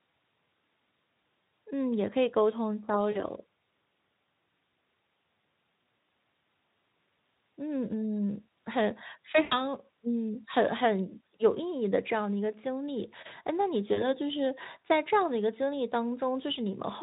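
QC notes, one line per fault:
3.11–3.21 s, 9.43–9.67 s and 13.93–14.09 s: VoIP packet loss concealed by the speech codec. About 40, 80 and 40 ms of audio went missing, consistent with two, four and two 20 ms frames. The Speex decoder bridged each gap by extending its last pitch and filter at falling gain. Each gap becomes a brief buzzy or noisy, fading smear, and the sound stays weak for a moment after packets resume.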